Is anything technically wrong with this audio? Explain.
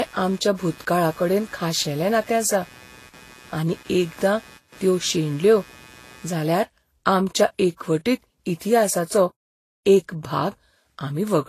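Yes, two problems. Throughout the speech, nothing is present above 14.2 kHz, and smeared, swirly artefacts of different textures overlap. This is likely transcoding between lossy codecs, with an MP3-to-HE-AAC-to-Vorbis chain where each encoder re-spends bits on the previous one's damage. A single codec would leave only one artefact character.

From 0 to 6.34 s there is computer activity noise, a buzzy chirping pulse near 150 Hz, roughly 25 dB below the speech. Processor or graphics load is disturbing the shared audio ground. Unlike steady mains hum, it fluctuates with machine activity and then stops.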